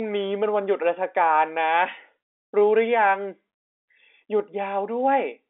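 Nothing stood out on listening to this telephone-band speech.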